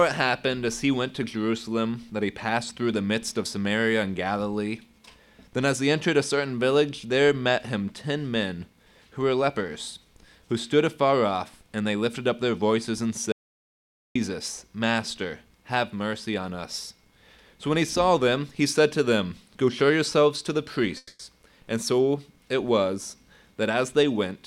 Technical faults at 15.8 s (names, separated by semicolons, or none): none